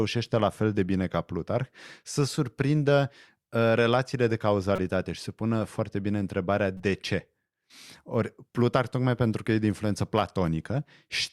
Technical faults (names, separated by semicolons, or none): corrupt frame decoded